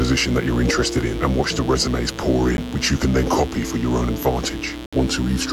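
A mains buzz runs through the whole clip, sitting at about 15 dB below the sound itself. Its base is 60 Hz, but sharp switching spikes, arriving twice per mains cycle from something like a dimmer, a rectifier or a missing shield, spread harmonics up to several kHz. That is what separates it from plain hum: instead of a smooth, low drone, it has a steady, raspy edge that carries into the upper range.

At 2.57 s there is a brief hole of about 13 ms, and from 4.86 to 4.93 s a longer one of about 67 ms. The likely cause is a Bluetooth dropout: audio packets did not reach the headphones in time and were discarded, so the output went silent until good ones arrived. The short gap fits a single lost packet, the longer one about five. Unlike a pause or stall, the sound picks up further along, as if it had kept playing through the silence.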